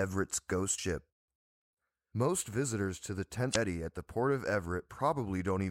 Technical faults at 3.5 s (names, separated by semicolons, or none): damaged data in a compressed stream